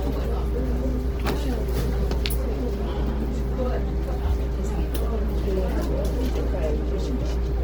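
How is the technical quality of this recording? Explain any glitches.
The technical quality is compromised by audible compression damage throughout the whole clip. The likely cause is Opus compression in its music mode at a low bitrate, about 16 kbps. The encoder runs out of bits and fills bands with folded or noise content, so tones sound grainy, rough and noisy while the full bandwidth up to about 20.2 kHz remains.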